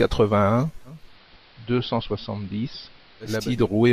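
From 0.84 to 3.55 s, speech drops about 3 dB and gains hiss about 30 dB below it: digital radio blending to AM analogue.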